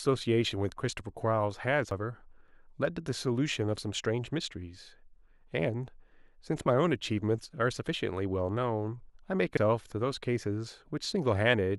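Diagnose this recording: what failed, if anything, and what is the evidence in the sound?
A CD skip at the playback stage, heard twice in the speech, at 1.91 s and 9.57 s. Each time there is a brief tick and a mute of only a few milliseconds, then the speech resumes from a different point. A knock or disc flaw threw the laser onto another turn of the spiral, so the timeline jumps by one or more whole revolutions. Unlike a network dropout or buffer underrun, the audio is not merely paused. The continuity itself breaks.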